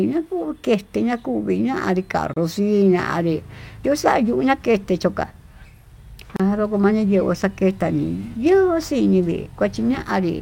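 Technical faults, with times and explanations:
2.34 to 2.36 s and 6.36 to 6.40 s, gap at a join of encoded pieces. The speech drops out for 29 ms, then 32 ms, four seconds apart. Separately encoded pieces were joined untrimmed, so encoder delay and end padding leave silence with smeared edges.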